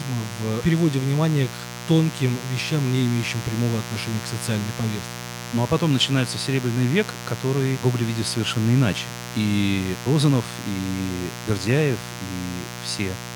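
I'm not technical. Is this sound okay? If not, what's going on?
No. A steady, raspy buzz runs under the speech for the whole clip, and it's fairly loud. This is mains buzz: electrical interference from the 60 Hz power supply, likely a dimmer or poor shielding, leaking into the recording as a harsh hum.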